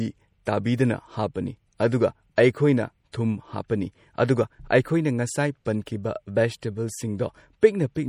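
Throughout the speech a watery, swirling texture sits on the sound, and sibilants carry a metallic chirp. This is most likely MP3 compression at a bitrate low enough to point to roughly 48 kbps. Short of bits, the encoder drops weak frequency lines, and they flicker in and out between frames. Content does extend up to about 20.3 kHz, so the damage is this flickering rather than a dull, band-limited top end. Broadband hiss would stay steady instead.

Pre-echo appears at 0.45, 2.36, 3.12 and 5.86 s. Each time, a brief hiss of about 11 to 17 ms arrives just before a sharp onset, and that onset sounds softened. The codec spreads the quantisation noise meant for the loud attack across its whole block, so the noise leaks into the quiet gap ahead of it. Because the hiss comes before the attack and not after, it cannot be reverb or a decay tail.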